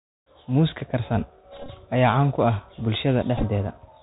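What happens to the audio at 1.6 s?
From 1.52 to 1.70 s the speech breaks into a Bluetooth headset packet repeated fault. Packets were lost and the chip replayed the previous packet's bits. Losses total about 105 ms, scattered, with runs up to about 20 ms. Each run buzzes near 267 Hz, from the 3.75 ms repeat.

Under this, the Bluetooth CVSD headset codec is plainly audible. Its one-bit delta coding at 64 kHz cuts everything above 4 kHz. Sibilants sound scratchy, loud highs distort, and a granular hiss sits beneath.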